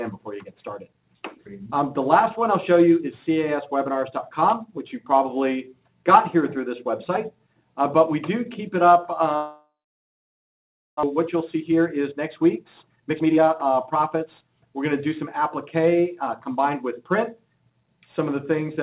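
At 9.36 s the incoming stream most likely stopped arriving for a long stretch, a long network dropout. The receiver stretched the last sound into a fading buzz, and within a few tenths of a second only silence remained, lasting about 1.26 s. The sound returns at 11.05 s, but about a second of material was never played and simply jumps ahead. The whole clip is band-limited to nothing above 4 kHz, consistent with a G.711 mu-law call path.

From 11.15 s to 15.39 s comes a jitter buffer speed-up. After the gap, the receiver was holding roughly 0.7 s more audio than it wanted. To drain that excess it repeatedly cut out short pitch-period-length slices, removing roughly 0.7 s in total. The result plays at about 114% of normal speed with the pitch unchanged, so the passage sounds hurried until it settles back at 15.39 s.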